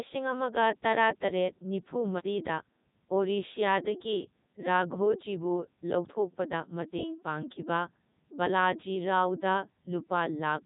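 Speech that sounds robotic and buzzy from start to finish, with heavy damage and nothing above about 3.8 kHz. This is the Codec 2 vocoder, which rebuilds the voice from sine waves using only pitch, voicing, energy and envelope. The sound fits its 3.2 kbit/s mode.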